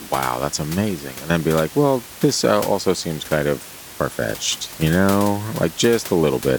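No technical faults are audible.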